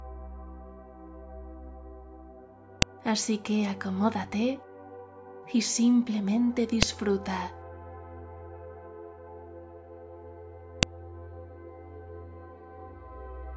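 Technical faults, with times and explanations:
2.82, 6.83 and 10.83 s, file header played as audio: a sharp, loud click lands at each join of 4-second pieces whose leftover header bytes are decoded as samples. Its strict 4-second spacing, regardless of what the sound is doing, separates it from random dropout clicks.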